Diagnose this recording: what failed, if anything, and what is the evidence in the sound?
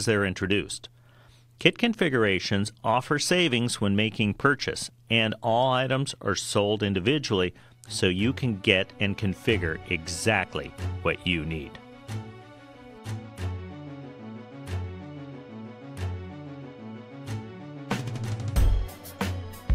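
Nothing in this recording points to a failure at any stage of the chain. There is no evidence in the sound that calls for a diagnosis.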